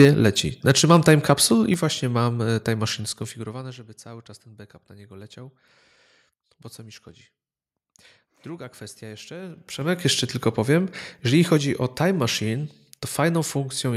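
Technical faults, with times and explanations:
0.0–0.05 s and 0.68–1.14 s, microphone overload: harsh, crackly edges on the loudest peaks, the first pushing about 4 dB past the converter's limit and the second about 2 dB, the second just before "capsule i właśnie mam". The likely cause is input gain set so high that the converter flattens the waveform tops.
0.05 s and 1.74 s, microphone volume stepped down: the whole sound, background included, drops abruptly by about 4 dB and then about 5 dB, the second between "capsule i" and "właśnie mam e time". This is likely software cutting the input gain in one jump after overload.
2.99–3.84 s, zipper noise: a fast ticking rides on the sound as it fades about 20 dB, in steps of about 2 dB at roughly ten per second, because the level changes in unsmoothed jumps that each click.
9.39–10.07 s, zipper noise: the same zipping texture returns as the level climbs about 20 dB, in steps of about 2 dB at roughly fifteen per second, ending just before "tylko powiem jeżeli".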